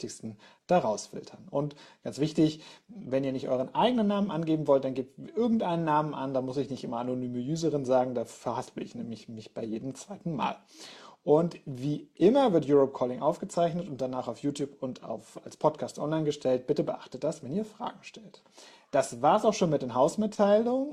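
No faults detected anywhere in the recording.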